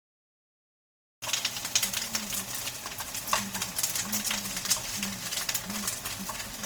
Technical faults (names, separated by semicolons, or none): transcoding between lossy codecs; cut-off start